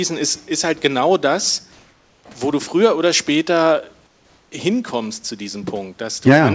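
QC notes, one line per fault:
4.07–4.52 s, comfort noise in place of the background: after "du früher oder später", smooth featureless hiss about 2 dB quieter, likely discontinuous transmission; spectrogram shows a uniform band.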